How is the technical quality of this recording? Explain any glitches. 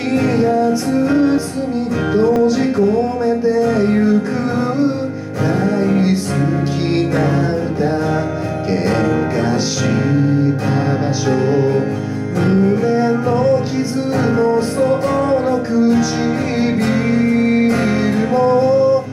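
Two brief glitches stand out. At 1.38 s and again at 2.36 s the sound jumps abruptly, skipping ahead without any gap, about 30 ms lost at the first point and around 10 ms at the second. This is likely a dropped buffer (overrun): the recording software fell behind, the hardware overwrote a block of samples before it was collected, and the audio on either side was spliced straight together.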